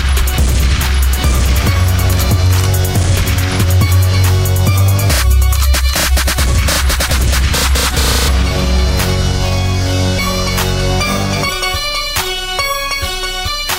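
At 6.57 s the audio jumps forward, and it does so again at 8.27, 10.18, 11.48 and 13.47 s. These are compressed frames skipped. Whole blocks of coded audio were never played, so the sound resumes further along. The frame length is 26.1 ms. Most jumps lose about 150 ms. The one at 8.27 s loses about 300 ms, and the last about 200 ms.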